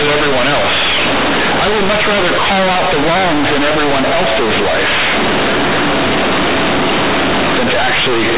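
From start to finish the speech is very loud and harshly buzzy, with strong noise filling the pauses. This is companded audio read as linear: A-law telephone bytes are played as raw 8-bit samples without expansion, so quiet passages swing as wide as loud ones and the waveform is badly distorted.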